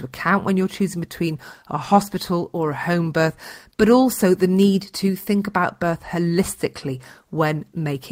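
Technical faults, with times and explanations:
Nothing technical stands out here; the speech comes through without any audible glitches to point to.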